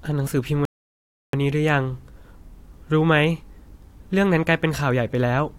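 At 0.65 s the speech drops abruptly into silence and stays silent until 1.33 s, when it picks up again at exactly the point where it broke off, with nothing skipped or repeated. This is a rebuffering stall: the player exhausted the audio it had already downloaded and had to wait for more before it could continue. No material is lost, but the gap adds about 0.68 s to the playback time.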